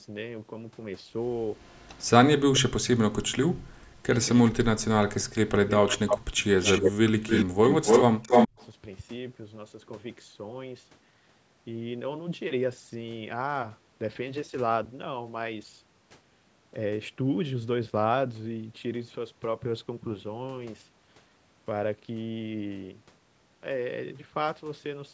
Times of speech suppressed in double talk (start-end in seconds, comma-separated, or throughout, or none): 2.60-5.70, 6.78-7.27, 7.83-8.60